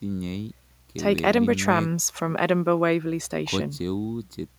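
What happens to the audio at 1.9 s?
Nothing goes wrong at 1.9 s; the speech carries on intact through that moment with no dropout, click or distortion.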